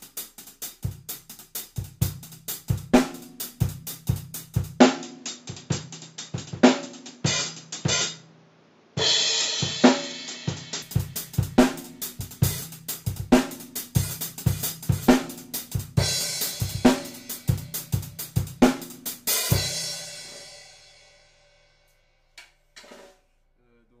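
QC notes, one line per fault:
4.80–10.82 s, likely input switched to a poorer device: narrower band sounds dull, spectrogram empty above 7.6 kHz, faint new noise floor, no gap.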